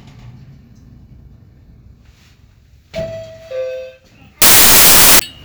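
A recording of sounds that breaks into loud, broadband noise from 4.42 to 5.19 s: samples built from the wrong bytes. The reader misassembled each sample's bytes, through a one-byte offset or swapped order, so the rapidly changing low bits dominate every value.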